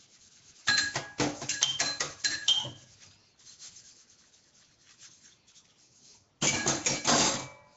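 Throughout the clip, the audio appears to have passed through a low-rate block codec, likely Nellymoser compression of the kind Flash used for microphone input, at a rate consistent with around 32 kbps. With only a fixed, small bit budget per block, weak bands are dropped and filled with synthetic noise, and nothing reaches above 7.8 kHz. The damage is plainly audible: a rough, hissy haze clings to the sound, everything is dulled at the top, and the texture has a smeared, underwater quality.

At 0.67 s there is a brief pre-echo, about 12 ms long. A sharp attack landed late in one of the codec's blocks, so quantisation noise sized for the loud onset was spread back into the quiet instant before it. A short burst of hiss arrives just ahead of the attack, and the attack itself loses its crispness and sounds softened and smeared.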